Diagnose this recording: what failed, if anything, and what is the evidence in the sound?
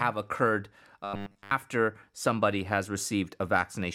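Robotic sound from repeated short buffers, 1.04 to 1.51 s. The speech becomes a rigid 100 Hz metallic buzz. That pitch fits a 10 ms segment looping. Most real audio there is skipped. The likely stage is the driver or buffer, starved of new data.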